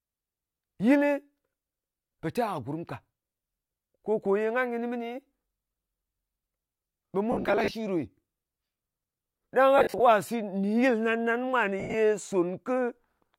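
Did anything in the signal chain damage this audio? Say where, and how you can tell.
Yes. Lost LE Audio frames on the Bluetooth link damaged this speech at 7.32–7.74 s, 9.78–10.00 s and 11.80–11.94 s. Dropped frames were scattered over those spans, and the LC3 decoder concealed each gap by repeating the last spectrum with randomised signs. Voiced sound turns into a brief noisy smear, and the longest run, about 70 ms, begins to fade toward silence.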